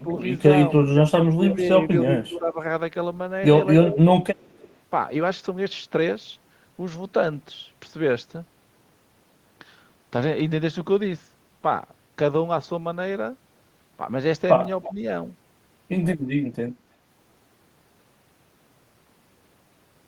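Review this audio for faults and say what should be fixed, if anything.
Speech suppressed in double talk at 0.03–0.17, 1.35–1.61, 2.13–2.59, 3.87–4.01 and 14.87–15.0 s: the level dips about 5 to 10 dB, likely because the echo canceller's suppressor is attenuating during overlap. Fix: tune double-talk detection so near-end speech isn't ducked.

Block of digital silence at 3.46 s (10 ms) and 14.65 s (5 ms): hard dropouts to silence, pointing to buffer underruns. Fix: enlarge buffering or raise processing-thread priority.

Echo leak at 4.36–4.74 and 14.82–14.94 s: a delayed copy about 322–326 ms behind, about 35 dB and 20 dB down, likely residual far-end loudspeaker echo. Fix: improve the far-end canceller's convergence and residual-echo suppression.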